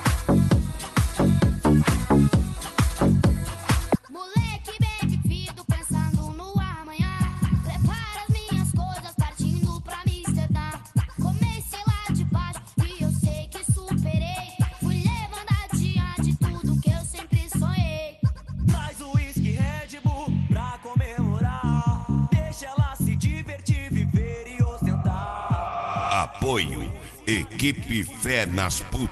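At 3.95 to 3.97 s there is a skip ahead: about a second and a half of audio was discarded and playback jumps straight to later material with no fill. On a waveform the envelope changes abruptly at one point. A spectrogram shows a hard vertical seam where the two sides of the jump are butted together.

From 6.16 to 8.27 s the jitter buffer speed-up runs the sound about 5% fast. The receiver cut short pitch-period slices, about a tenth of a second in total, to drain excess buffered delay. A second pass from 8.74 to 10.08 s plays about 4% fast and removes roughly 50 ms. Both stretches play at an unchanged pitch, and the first sounds slightly hurried. On a spectrogram the harmonics keep their spacing while events arrive a little sooner. The waveform shows periodic cycles quietly missing rather than any gap.

Throughout the clip, the call codec's coding noise is present and energy stops near 12 kHz, which fits Opus at a moderate bitrate around 32 kbps.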